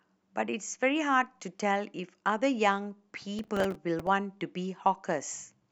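From 3.39 to 4.07 s, processor overload crackle tears through the speech. The processor keeps missing its deadlines for short buffers of around 5 ms. About twenty times, a stale slice of old audio replays with hard edges. Together these make a gritty, crackling burst.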